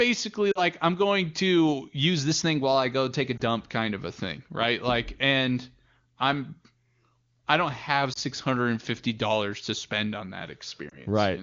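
Lost AMR speech frames hit at 0.52–0.61 s, 3.37–3.41 s, 8.13–8.19 s and 10.89–11.01 s. The decoder patches each gap by stretching the last good frame with fading gain, so you get a short warble or dip. The first, about 40 ms, fits two frames.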